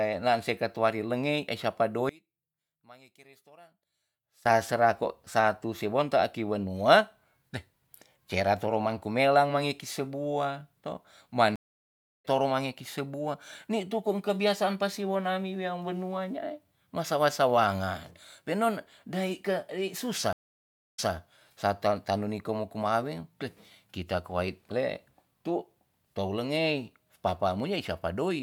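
One channel inverted, from 2.09 to 4.46 s, just after "katuari lengei e sapa": the speech collapses by about 28 dB into a faint residue. This likely comes from one stereo channel having reversed polarity, so the matching centre content cancels when the two are summed to mono.

Stream reconnect at 11.56 s, after "sebua to man": the audio drops out for 0.66 s and resumes at "toro mangi ki sebua", roughly 0.7 s further on, with that stretch lost. A second stream reconnect at 20.33 s gives 0.6 s of silence before "sarta tanu", resuming 0.19 s earlier so a short stretch repeats. Each time the connection broke and a fresh decoder started mid-stream.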